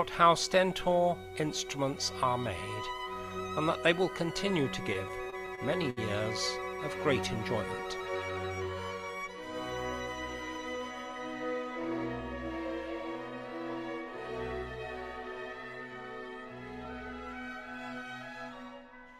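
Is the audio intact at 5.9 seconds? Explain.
No. At 5.9 s the clip is inside a run of repeated stalls (stutter) from 4.93 s to 5.99 s. Packets arrived late or more slowly than playback consumed them, so the jitter buffer ran dry eight times. Each time the receiver extended the last sound, fading it during the longer waits, for about 151 ms in total, with the longest gap 64 ms. Nothing is lost, but roughly 14% of that span is filled, so the audio drags and stutters.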